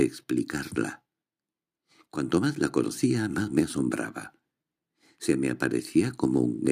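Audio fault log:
No audible faults detected.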